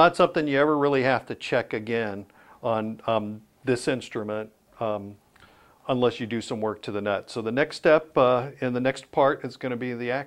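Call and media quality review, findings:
Nothing stood out on listening to this recording, and no finding is raised against it.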